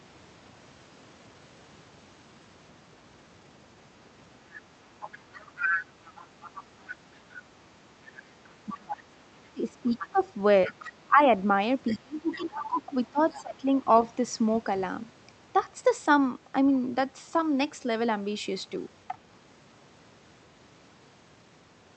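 From 5.02 to 7.43 s a second voice sits behind the speech, only a little quieter than it, with fainter scraps returning at 8.05 to 8.78 s, 9.89 to 10.9 s, 11.88 to 12.67 s and briefly at 13.35 s. This is the other side's voice leaking through, likely loudspeaker sound picked up by the microphone that the echo canceller failed to remove. From 8.73 to 11.29 s and again from 11.95 to 13.86 s, the main speech dips and drops out in pieces, at worst by roughly 25 dB, while the other side talks. This is likely speech suppressed in double talk: the canceller could not separate the talker from the echo, so it turned both down.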